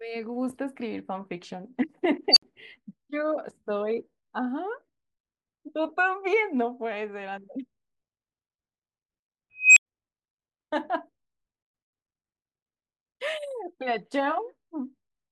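At 2.31–2.43 s and 9.57–9.86 s, an unstable filter's feedback runs away. A squeal near 5 kHz, then near 3 kHz, swells over 50 ms and 195 ms into clipping, then drops to silence for 61 ms and 96 ms. A spectrogram shows a brightening horizontal line ending in a blank gap. The waveform shows an expanding envelope flattened where it clipped, then silence.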